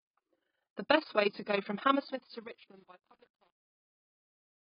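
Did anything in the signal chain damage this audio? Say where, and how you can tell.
Yes. Overlap-add ripple runs throughout. The level pumps by about 11 dB, around 30 times a second. A processing stage rebuilt the audio from frames whose windows don't sum evenly.

The codec stage did heavy damage. Nothing survives above 5.1 kHz, and the sound is dull and smeared. That likely comes from AAC compression at a very low bitrate.

Truncation distortion on a fade starts at 1.89 s, after "way to go from", and runs to 4.72 s. From 2.22 s the fading speech turns gritty, which fits an undithered 9-bit volume stage.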